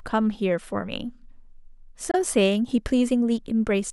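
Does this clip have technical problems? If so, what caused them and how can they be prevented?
Yes. At 2.11 to 2.15 s the speech falls silent for about 23 ms, consistent with one lost frame, likely a Bluetooth dropout. Unlike a buffer underrun, which stalls and resumes where it stopped, the speech here resumes further along. Keeping the headphones close to the source, without obstructions or 2.4 GHz interference, helps prevent this.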